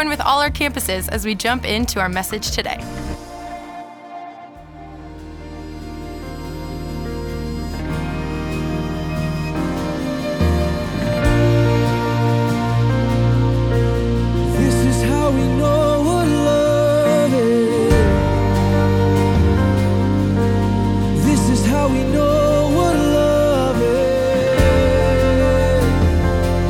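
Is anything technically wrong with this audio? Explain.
No, no technical faults heard.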